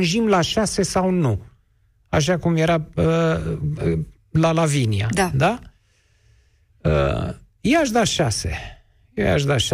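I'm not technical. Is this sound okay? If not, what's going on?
Yes, no technical faults are audible anywhere in this speech recording.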